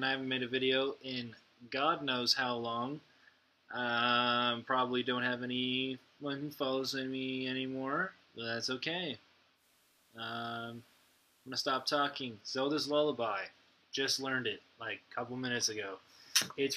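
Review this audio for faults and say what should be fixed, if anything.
At 9.54 s the audio shows digital radio blending to analogue. The hybrid receiver lost its digital signal and cross-faded to the FM broadcast of the same station. The cross-fade takes 109 ms. The FM stretch lasts until 12.16 s, where the receiver blends back to digital. During it, the level drops by about 2 dB. A hiss sits roughly 35 dB below the signal. To prevent this, capture from a wired or streamed feed, or improve digital reception so the receiver never falls back.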